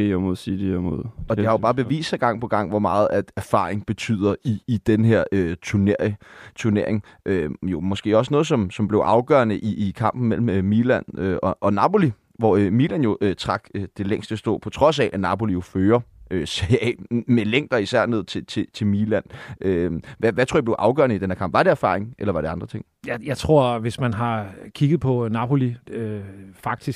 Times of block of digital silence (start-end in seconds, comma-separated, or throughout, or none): none